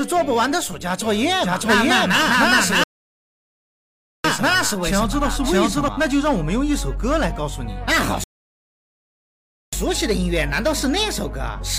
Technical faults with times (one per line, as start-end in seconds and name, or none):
1.42-5.88 doubled audio track
2.84-4.24 rebuffering stall
8.24-9.73 rebuffering stall